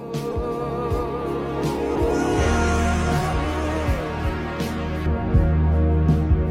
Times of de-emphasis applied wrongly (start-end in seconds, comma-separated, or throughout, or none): 5.06-6.50